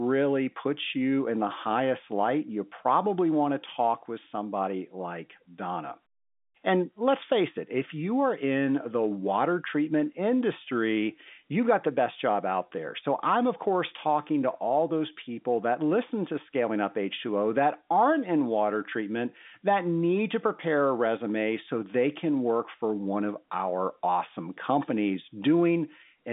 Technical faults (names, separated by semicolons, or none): none